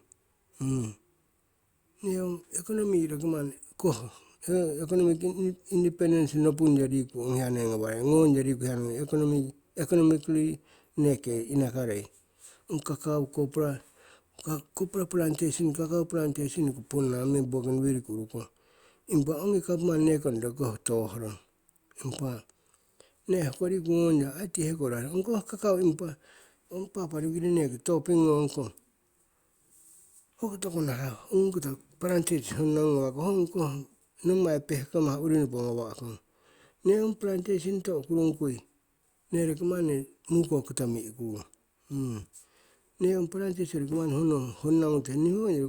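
No technical faults are audible.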